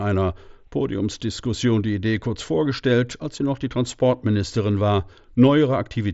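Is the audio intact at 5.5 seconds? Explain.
Yes, at 5.5 seconds the speech comes through intact, carried by the wideband Bluetooth mSBC headset link with its usual ceiling just below 8 kHz and no dropout, click or distortion at that moment.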